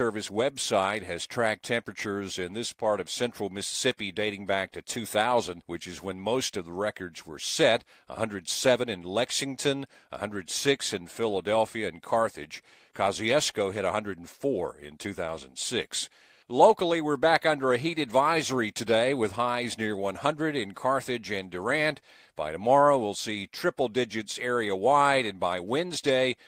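No technical faults can be heard anywhere in the speech.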